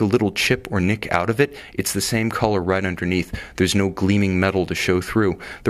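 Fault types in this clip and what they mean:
No faults detected anywhere in the clip.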